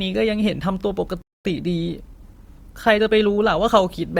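At 1.22 s the speech just drops out for about 230 ms, back at 1.45 s. That's a playback stall: the player most likely ran dry of buffered data, or its thread got held up, so there was nothing to send out for that gap.

Right after, from 1.45 to 3.77 s, you get time-compressed catch-up. The player trims its backlog by snipping out tiny slices and cross-fading the joins, so the speech runs about 1.1 times fast at normal pitch.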